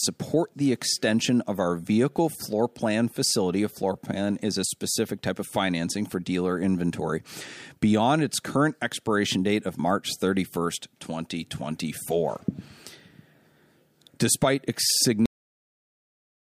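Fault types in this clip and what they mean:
Cut-off end: the final buffers never got written, so the speech stops dead mid-sound at 15.26 s and falls straight into digital silence, no decay.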